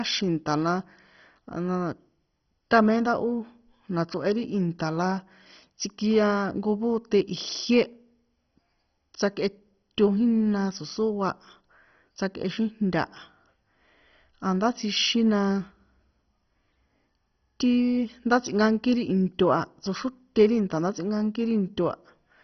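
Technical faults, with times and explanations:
Throughout: MP2 compression, likely, at a rate that fits about 32 kbps. The speech is dull, with nothing above 6.1 kHz, and carries a gurgling, granular grit from coarsely quantised sub-bands. A spectrogram shows a hard ceiling at 6.1 kHz and blocky bands flickering on and off beneath it.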